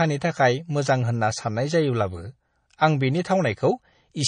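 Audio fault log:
Throughout: MP3 compression. The speech sounds watery and swirly, with a metallic chirp clinging to the s sounds and consonant attacks that smear rather than snap. Nothing is present above about 9.4 kHz, so the top end is cut cleanly off. The likely cause is a low-bitrate MP3 encode, around 35 kbps, where the encoder runs short of bits, drops the treble at a fixed frequency and zeroes weak frequency lines that flicker on and off between frames.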